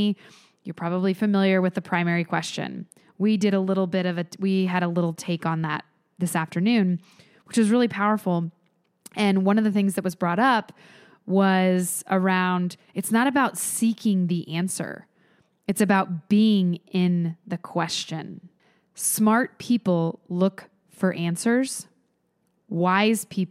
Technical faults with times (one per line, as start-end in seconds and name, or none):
none